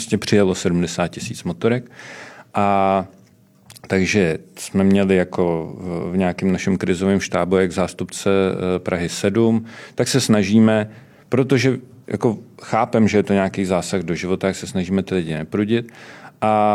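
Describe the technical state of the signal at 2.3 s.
At 2.3 s the speech signal is intact, with no audible fault at that moment.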